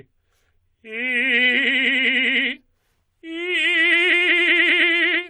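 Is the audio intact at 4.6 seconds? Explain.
Yes, the music plays through 4.6 seconds intact, with no dropout, click, glitch or other fault at that moment.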